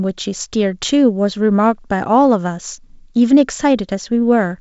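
No faults found: the speech carries G.722 wideband coding at 56 kbit/s, band-limited to 7.7 kHz with the light coding hiss that rate leaves in both bands.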